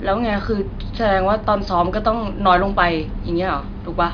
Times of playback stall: none

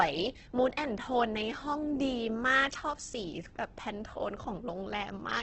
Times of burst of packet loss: none

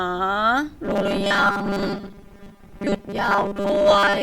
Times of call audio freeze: none

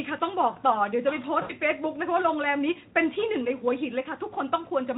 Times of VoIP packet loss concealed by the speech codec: 1.41-1.52

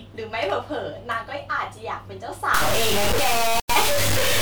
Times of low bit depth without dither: 2.54-4.42

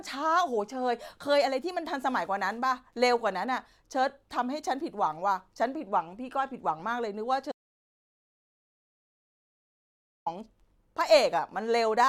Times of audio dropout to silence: 7.52-10.26

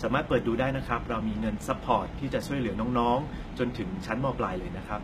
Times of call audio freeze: none

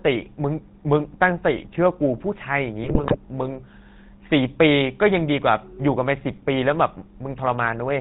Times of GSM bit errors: 2.84-3.16

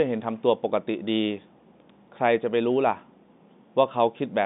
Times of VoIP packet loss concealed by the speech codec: none

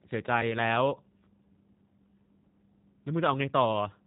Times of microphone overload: none

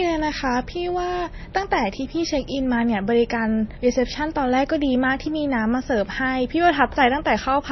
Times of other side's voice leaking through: none

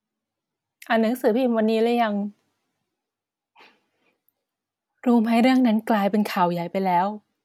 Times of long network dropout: none

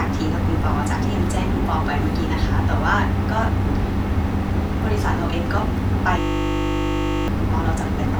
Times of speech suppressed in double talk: none

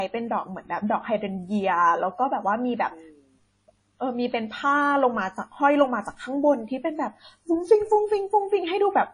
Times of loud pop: none

